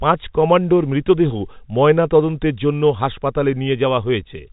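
No technical faults can be heard in the speech, which comes through the telephone coding as that format normally sounds.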